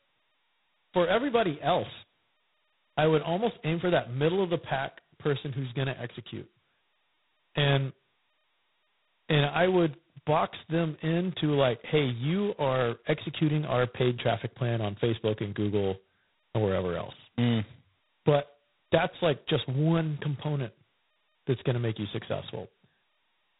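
Speech, with G.726 ADPCM damage running the full length of the clip. The coding is heavy: a coarse, rasping hiss rides on the speech and rises and falls with its level. That points to very few bits per sample describing the error of an adaptive predictor, which fits the 16 kbit/s mode. Nothing passes above 3.9 kHz, so the sound has the narrow, boxy band of a telephone line.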